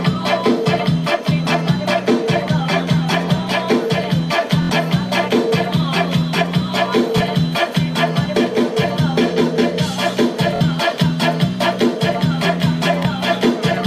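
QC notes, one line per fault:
4.62–4.70 s, Bluetooth stutter: about 70 ms of data missing, which fits three lost or late packets. The receiver replays its last buffer, so a short slice repeats as a buzz before the sound resumes further on.
7.18–7.20 s, Bluetooth stutter: about 23 ms missing, likely one packet; a single repeated slice gives a brief hitch.
10.56–10.61 s, Bluetooth stutter: about 46 ms missing, which fits two packets, so the repeat runs twice as long.
13.03–13.05 s, Bluetooth stutter: about 23 ms missing, a one-packet hitch.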